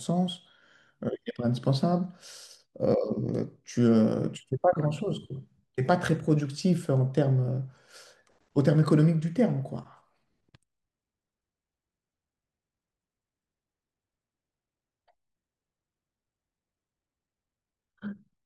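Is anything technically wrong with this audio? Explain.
Yes. From 5.06 to 6.26 s there is a block size mismatch (truncated). One processing stage hands on longer blocks than the next stage takes in. The tail of each block is discarded. Those regular cuts make a buzz at about 46.9 Hz, which fits 1024-sample blocks at 48 kHz. The speech keeps its normal pitch and speed through the section. The buzz sits under it like a rough, gated edge.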